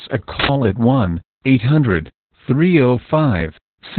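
Throughout this speech clip the voice sounds muffled, hoarse and faintly robotic, with nothing above about 4.3 kHz. That points to heavy Opus voice compression in narrowband SILK mode, consistent with roughly 8 kbps, where the excitation is coded very coarsely.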